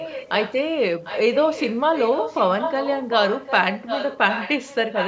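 Repeats of the speech trail it by about 0.75 s at 0.0–0.55 s, 1.04–1.36 s, 1.52–1.79 s, 1.95–3.52 s and 3.7 s to the end. This is echo leak, likely from a far-end speakerphone whose echo canceller let its own playback return. The copy sits about 15 dB down early on, rising to about 5 dB below the speech by the end. A spectrogram shows faded harmonic patterns shifted right by that fixed lag, and a waveform shows weaker envelopes shadowing the bursts.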